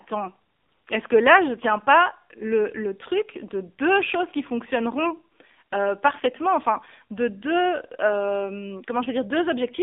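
From start to finish the speech carries AMR narrowband mobile codec damage: nothing passes above 3.6 kHz or below 250 Hz, and the voice sounds plainly buzzy and synthetic. That coarse texture, unlike a clean band-limit, fits a low AMR-NB mode near 7.4 kbps.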